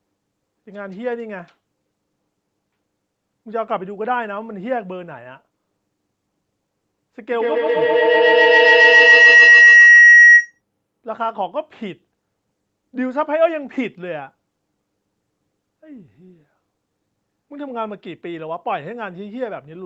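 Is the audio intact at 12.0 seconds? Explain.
Yes, the speech at 12.0 seconds is intact, with no fault at that moment.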